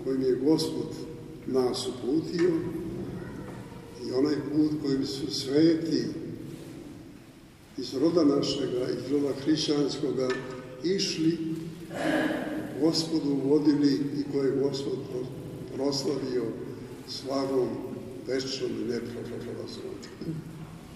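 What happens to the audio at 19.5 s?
Around 19.5 s the audio stutters from repeated frames. Between 19.24 and 19.56 s a 156.7 ms block of compressed audio is played two extra times, so that fraction of a second is heard three times in a row and the clip grows by 313.5 ms. On a spectrogram the same pattern appears side by side. A waveform shows matching shapes that repeat.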